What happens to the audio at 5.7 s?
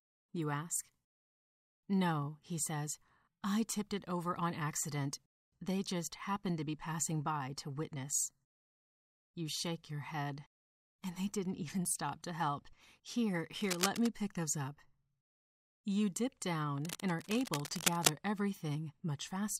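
Nothing goes wrong at 5.7 s; the speech there plays through intact, with no dropout, click, distortion or other technical fault.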